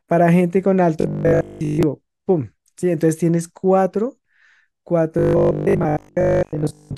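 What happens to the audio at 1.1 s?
At 1.1 s the speech has robotic sound from repeated short buffers, from 1.01 to 1.83 s. It turns into a rigid, metallic 50 Hz buzz. This likely comes from audio arriving too seldom, with roughly 20 ms chunks replayed for most of that span.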